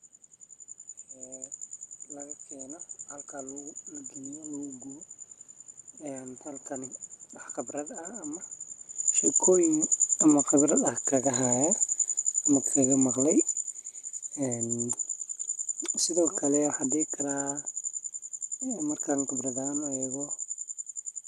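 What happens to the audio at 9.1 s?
Automatic gain falling runs from 9.0 to 11.97 s. The AGC, reacting to a hot input or strong background noise, eases gain down by about 6 dB, so the sound and its background sink together.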